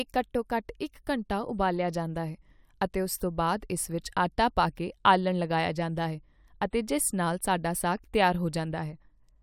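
Listening closely to the speech, nothing stood out as a technical fault at any point.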